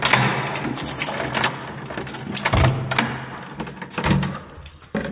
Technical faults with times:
none

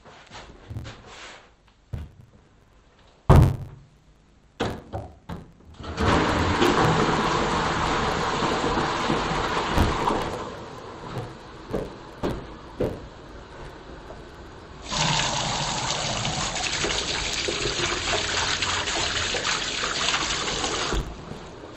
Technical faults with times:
0.00-21.76 interleaved audio read as planar

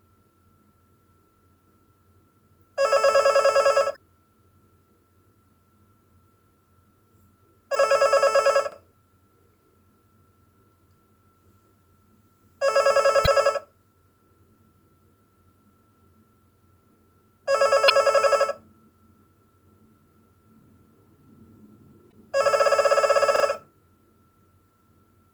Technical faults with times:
3.92-3.97 damaged data in a compressed stream
7.72-7.77 damaged data in a compressed stream
8.72-8.76 repeated buffer
13.23-13.28 damaged data in a compressed stream
17.86-17.91 damaged data in a compressed stream
22.09-22.14 damaged data in a compressed stream
23.36-23.44 repeated buffer

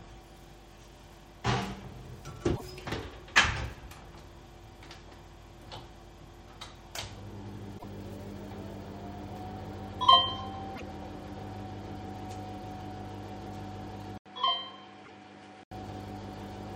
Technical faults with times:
2.52-2.62 damaged data in a compressed stream
7.75-7.84 damaged data in a compressed stream
10.72-10.81 damaged data in a compressed stream
14.18-15.71 input switched to a poorer device
15.01-15.10 damaged data in a compressed stream

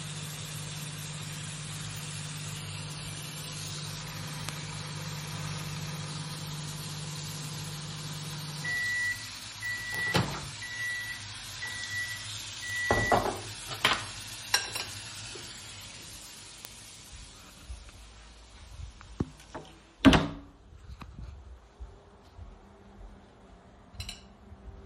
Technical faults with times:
4.49 bit error spike
9.95 bit error spike
12.70 bit error spike
13.93 bit error spike
16.65 bit error spike

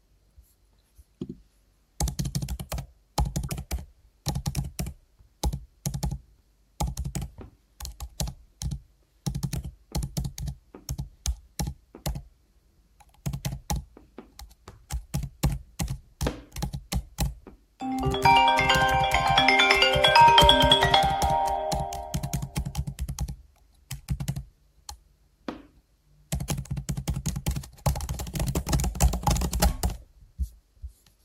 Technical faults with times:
3.44-3.50 damaged data in a compressed stream
24.04-24.08 damaged data in a compressed stream

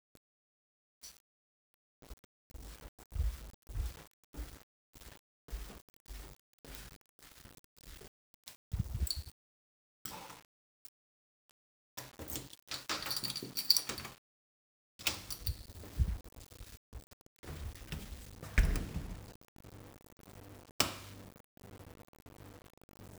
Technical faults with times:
0.00-23.18 low bit depth without dither

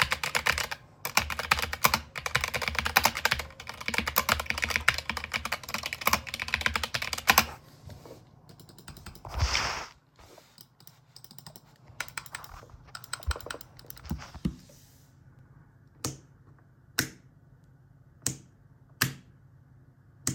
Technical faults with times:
15.39 CD skip

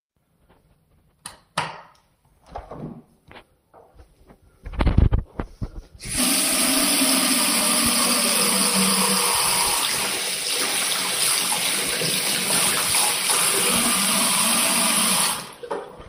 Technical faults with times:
none

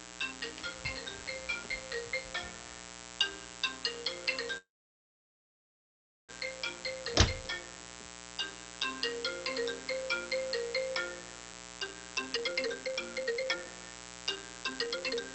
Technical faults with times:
0.00-15.34 mains buzz
4.57-6.31 call audio freeze
11.53-13.65 jitter buffer speed-up
14.35-15.22 jitter buffer speed-up

